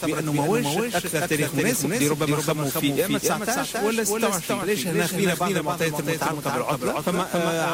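There's a doubled audio track throughout: a full-band copy trails by roughly a third of a second, a few dB quieter, with no decay, likely a second capture path.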